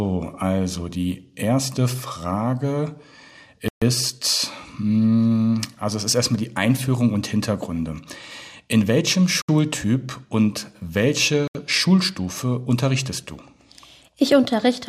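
A likely Bluetooth stall, in which radio interference delays packets until the headphones' buffer runs empty, interrupts playback three times. The audio drops to dead silence from 3.68 to 3.82 s (133 ms), again from 9.42 to 9.49 s (69 ms), and from 11.48 to 11.55 s (74 ms). Each gap is a clean cut with no fade. The sound then resumes as the resent packets arrive.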